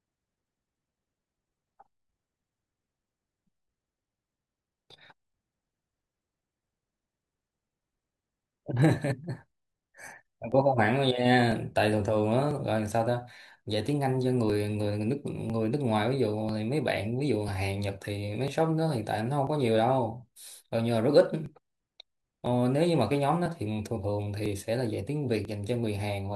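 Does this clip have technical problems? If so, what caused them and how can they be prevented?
Yes, there are periodic USB or driver dropouts running from about 0.57 s to 25.45 s, a tick roughly every 1.0 s, around thirty in all, heard only while someone is talking. Each time, something stalls the USB bus or audio driver on a fixed schedule and a few milliseconds of audio simply get skipped, so the waveform jumps and clicks. To prevent it, track down and disable the recurring background task, or give the interface its own USB port and a larger buffer.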